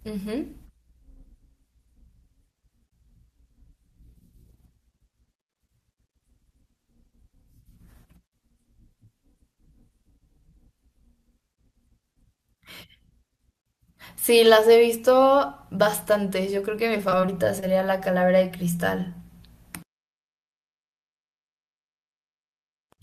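From 16.97 to 17.64 s there is repeated packet loss, giving a robotic sound. Five short gaps, the longest 23 ms, were patched by extending the previous sound, making the speech choppy. A spectrogram shows brief frozen, smeared harmonic blocks; the waveform shows repeated cycles.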